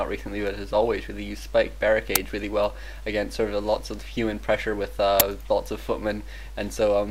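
Uninitialised buffer at 2.16 s and again at 5.20 s. Each time, a block of audio reached the output before any samples had been written into it, so whatever stale data sat in that memory was played as sound. The result is a brief, loud crack or burst of digital noise: about 5.3 ms at 2.16 s, which fits a 256-sample block, and about 10.7 ms at 5.20 s, which fits a 512-sample block.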